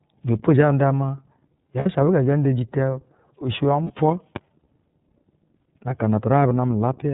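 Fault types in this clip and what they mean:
iLBC codec: The speech is band-limited, with nothing above 4 kHz, and sounds plainly rough and slightly synthetic. It is coded by iLBC, a narrowband VoIP codec that handles each 30 ms frame on its own, and the 30 ms frame size points to roughly 13.3 kbps.
Lost iLBC frames: Twice the sound freezes into a brief held, buzzy vowel-like tone, at 1.79 to 1.87 s and 3.84 to 3.91 s, then snaps straight back. Missing packets, about two 30 ms frames each time, were concealed by repeating the last pitch cycle with noise.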